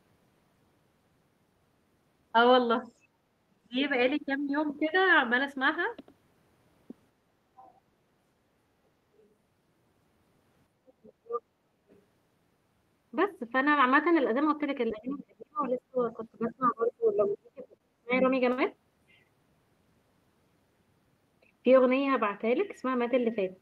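From 3.5 to 3.76 s and 11.0 to 11.42 s, speech suppressed in double talk: the voice drops by roughly 30 dB and 35 dB respectively, likely an echo canceller muting both talkers, seen as sudden dark gaps in the spectrogram. Other side's voice leaking through appears faintly at 7.56 to 7.8 s and 9.17 to 9.28 s, likely residual loudspeaker echo, showing as low-level harmonic traces. At 11.71 to 11.86 s the background is gated by the echo canceller, a dip of about 8 dB visible as a brief notch in the noise floor, followed by another leak at 11.89 to 12.01 s. From 14.9 to 18.24 s a long suppression in double talk drops the voice by about 35 dB, with a louder leak at 16.49 to 16.68 s. Short stalls from late packets at 17.77 s and 18.52 s hold the sound for 27 ms and 56 ms, appearing as smeared, repeated spectral columns.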